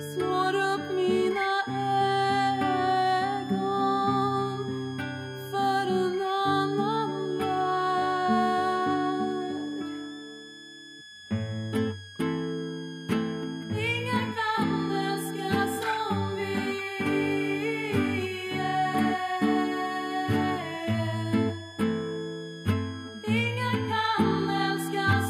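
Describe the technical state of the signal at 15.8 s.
At 15.8 s the switching supply whistle is present, as it is across the whole clip. A switch-mode power supply is cycling at an audible rate, or two supplies are beating, leaving a thin, high whistle that wanders between about 1.6 and 1.75 kHz, roughly 20 dB below the programme. A spectrogram shows a narrow, slightly wavering horizontal line in that band. The waveform shows it only as fine fuzz riding on the signal.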